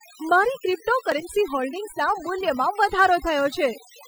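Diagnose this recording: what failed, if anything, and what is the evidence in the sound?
Overdone noise removal in the processing stage runs throughout: the background collapses to near silence with twinkling specks, and quiet spectral detail of the speech is stripped along with the noise.

Overlap between stream segments at segment reassembly during playback: around 1.12 to 1.15 s, roughly 28 ms is discarded at a boundary, leaving a small skip in the speech.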